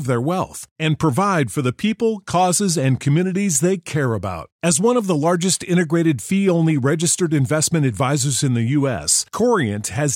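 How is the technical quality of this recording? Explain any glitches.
The recording has no technical faults. There are no glitches in this speech to explain.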